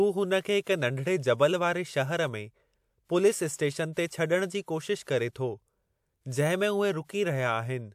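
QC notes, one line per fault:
5.03–5.07 s, pre-echo: a short hiss rises for about 37 ms just ahead of a sharp speech onset, and the onset itself lands softened and smeared. The codec spread quantisation noise across its whole transform block, so the noise sized for the loud attack also filled the quiet stretch before it. Unlike a room echo or reverb tail, which trails after a sound, this smear arrives before the attack it belongs to.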